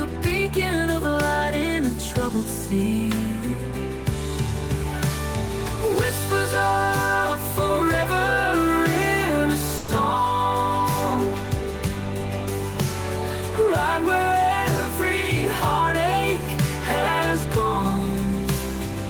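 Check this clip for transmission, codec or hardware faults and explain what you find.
One transmission fault stands out: a call audio freeze from 9.77 to 9.90 s. For about 110 ms the sound stops progressing and is replaced by a continuation of the last instant, a short buzzy or hissy tail that fades. The likely cause is packets held up in transit, draining the jitter buffer so the receiver had to fill the wait. Playback then resumes exactly where it stopped, with nothing lost, so everything after 9.90 s runs about 110 ms later.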